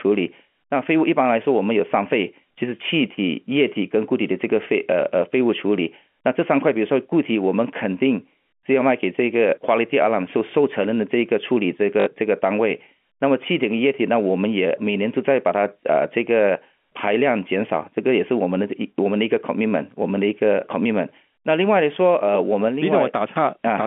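At 12.0 s, packet loss with the last packet repeated replays held audio across a 60 ms gap: a brief robotic stutter, not a silent dropout.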